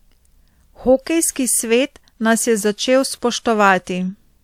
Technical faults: hard clipping

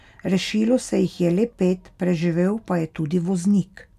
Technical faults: none

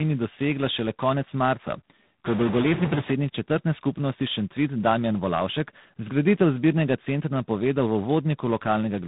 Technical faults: tandem speech coding

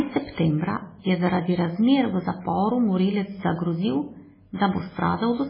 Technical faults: MP3 compression; pre-echo

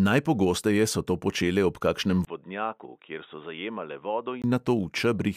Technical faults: input switched to a poorer device

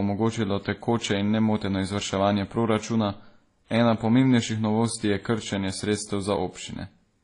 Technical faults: transcoding between lossy codecs

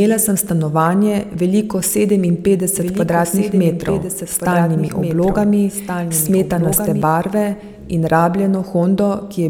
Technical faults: doubled audio track

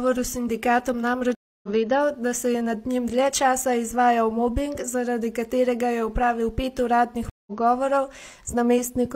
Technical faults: stream reconnect

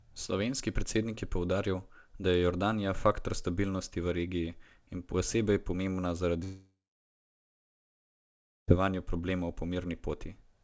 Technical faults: long network dropout

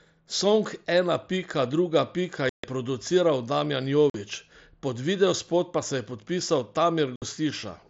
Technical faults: unconcealed Bluetooth headset packet loss

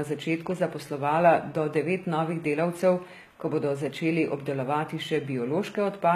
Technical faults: HE-AAC compression

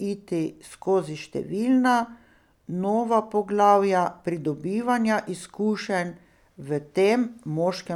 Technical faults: none

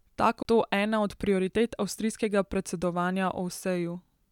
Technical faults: CD skip

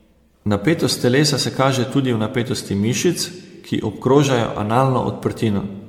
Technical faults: generation loss

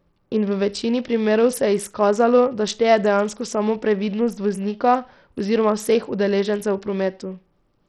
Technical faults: Bluetooth SBC compression

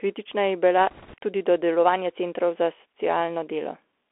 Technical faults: Bluetooth CVSD headset codec; bit errors on a Bluetooth voice link

